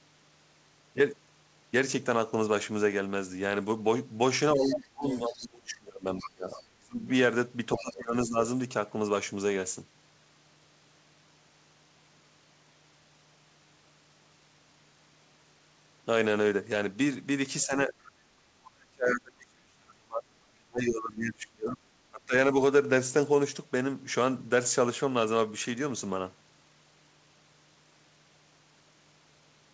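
Things go wrong at 4.55 s, when the talker's level sinks hard, at its worst by about 30 dB, and pieces drop out across roughly two seconds until 7.07 s. That's speech suppressed in double talk: both ends were talking at once, and the echo canceller, likely unable to separate the near voice from the loudspeaker echo, turned everything down. It happens again, more gently, from 7.76 to 8.37 s (about 15 dB down) and briefly from 17.66 to 17.93 s (about 10 dB). The biggest one runs from 18.71 to 22.33 s, with drops near about 35 dB and around three seconds of it chewed up.

Overlapping that first stretch, the other side's voice leaking through turns up as a second voice, from 4.64 to 5.37 s at about 10 dB under the talker and from 6.24 to 6.63 s at about 20 dB under. Later there are tiny scraps at 18.04 to 18.09 s (about 30 dB down) and 21.71 to 21.76 s (about 20 dB down). That's likely loudspeaker playback the canceller didn't fully scrub from the mic. 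The call path itself is band-limited, with nothing above 8 kHz, which fits G.722.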